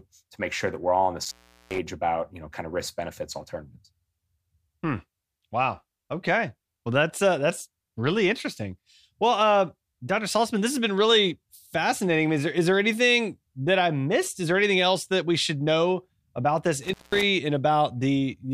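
Intermittent contact appears at 1.24 to 1.78 s, between "we're all on the" and "about you know kind", and again at 16.83 to 17.23 s, just after "should know about this". A loose cable or plug briefly loses its connection, so the speech drops out for about 397 ms the first time and about 190 ms the second. Each gap is bracketed by crackle as the contact scrapes open and closed, and faint hiss remains while the line is open.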